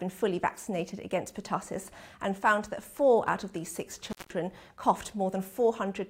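At 4.10 s the audio drops out through an intermittent contact, a loose cable or plug connection that briefly loses continuity. The signal path stays open for about 177 ms, and the whole disturbance spans 4.10 to 4.33 s. Crackle marks the moments the contact breaks and remakes, and between them the program sound disappears, leaving only faint hiss on the open line until the connection closes again.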